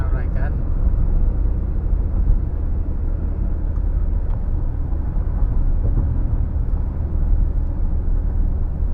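From the first moment to the last there's a steady 50 Hz buzz riding on the sound, the signature of a resampler restarted on every block. The conversion, which points to 44.1 kHz material going to 48 kHz, was done in isolated 20 ms chunks, so each chunk's edges got interpolated against silence or wrapped-around samples instead of their real neighbours. Every seam leaves a tiny error, and at fifty seams a second those merge into a buzz that rises and falls with the signal.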